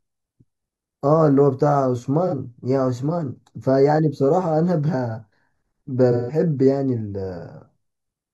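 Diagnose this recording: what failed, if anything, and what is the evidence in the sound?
A channel delay (comb filtering) at the mono fold-down gives the speech a hollow, phasey quality throughout. One channel trails the other by a fraction of a millisecond, so the shared content cancels at evenly spaced frequencies, with the first notch near 3 kHz.

AAC frame loss with concealment at the codec stage shows up as a brief smeared, noisy patch at 2.27 to 2.34 s, about 43 ms, which fits a single lost frame. From 6.11 to 6.39 s, about 171 ms, consistent with four frames, the decoder's extrapolated spectrum decays and fades back in.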